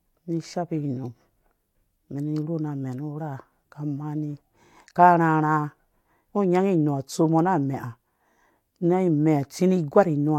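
The speech recording has no audible technical faults.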